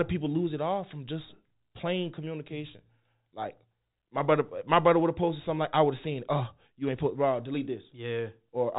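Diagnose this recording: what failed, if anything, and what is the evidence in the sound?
Nothing failed in this recording: the speech comes through G.711 telephone coding as expected, with its band ending near 3.8 kHz, and the sound gives no evidence of a fault.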